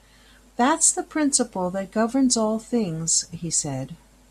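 A speech recording, and nothing is technically wrong with it.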